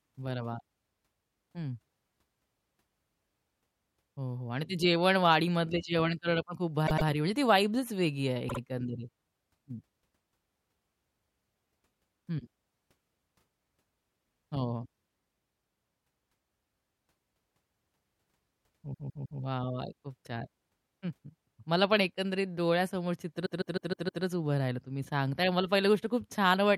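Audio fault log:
6.86 s to 24.23 s, repeated frames: short runs of compressed speech frames were played again, at 6.86 s (105 ms block, twice more), 8.48 s (52 ms, twice), 18.93 s (157 ms, three times) and 23.45 s (157 ms, five times). Each replay is a stutter, and the clip is stretched by about 1.57 s in all.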